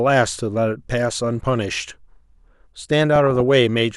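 A speech recording suffering DAB burbling twice: at 1.10 to 1.19 s, and again at 3.16 to 3.41 s. Weak reception let bit errors, at a rate of a few tenths of a percent, slip past error correction into the MP2 audio data. Corrupted samples then put short blips of noise into single sub-bands and corrupted scale factors throw individual sub-bands up or down in level frame by frame, so the speech burbles, a disturbance that points to about a dozen damaged frames in each burst.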